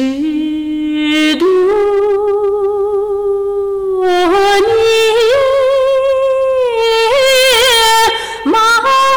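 Hard clipping runs through the whole clip: the signal is driven about 18 dB past what the stage can pass, so nearly a third of the waveform is sliced flat. Those squared-off tops spray high harmonics, giving every loud moment a harsh, gritty fuzz.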